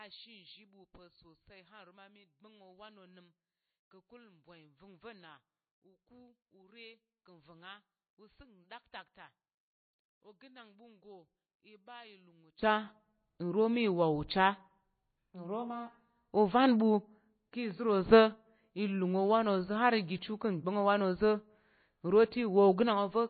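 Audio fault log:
Throughout: MP3 compression. The speech is cut off sharply at about 4.5 kHz and nothing comes through above it, so sibilants lose their edge and the sound is dull. The coding damage is plainly audible. Weak spectral detail drops in and out between frames, giving a watery, swirly texture, and consonant onsets smear. The hard treble ceiling and the amount of damage point to a low bitrate, likely an MP3 encode at around 24 kbps.
0.0–12.6 s: one channel inverted. For this stretch the sound falls by about 24 dB. The centred speech content largely disappears, leaving only a faint residue of whatever differs between the two channels. This is the pattern you get when one channel has reversed polarity and the pair is summed to mono, so the shared content cancels, which is the likely cause here. Full level returns after 12.6 s.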